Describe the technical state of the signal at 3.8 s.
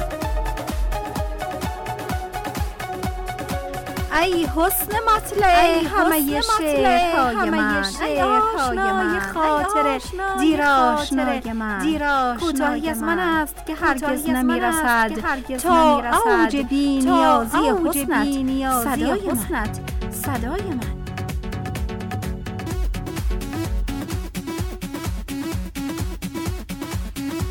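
At 3.8 s, as throughout the clip, a doubled audio track is present: a second full-band copy of the sound runs about one and a half seconds behind the original, roughly 5 dB quieter. The likely cause is the signal being captured again by a slower path, or an edit holding two copies out of step. Unlike an echo or reverb, the copy repeats once, with no decay, no room colour and no dulling of the high end.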